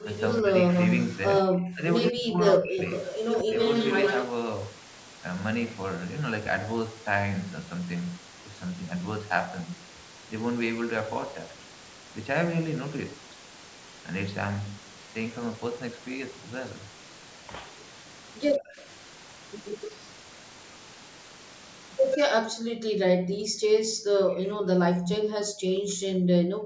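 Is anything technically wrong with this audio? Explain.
Yes. Speech suppressed in double talk occurs at 0.0 to 3.55 s, 18.57 to 18.77 s and 22.17 s to the end. The speech dips sharply, by roughly 30 to 40 dB, likely because an echo canceller could not separate this talker from loudspeaker echo while both sides spoke, and turned everything down.

Echo leak occurs at 0.0 to 4.25 s, 18.76 to 19.9 s, 22.11 to 22.3 s, 23.29 to 23.36 s and 25.06 to 25.17 s. A copy of the voice trails 133 ms behind, between about 5 and 15 dB below the speech. It is likely loudspeaker pickup that the far end's echo canceller failed to remove before sending the audio back.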